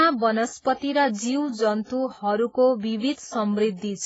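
Throughout the speech, the signal was likely passed through transcoding between lossy codecs. A very low-rate AAC encode, around 16 kbit/s, was re-encoded as WMA. The second codec wastes bits on the first's artefacts and adds its own. The two artefacts layer, and nothing remains above 7.6 kHz.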